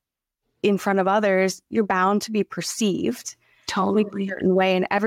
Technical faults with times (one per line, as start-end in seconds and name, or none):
0.00-5.07 gain pumping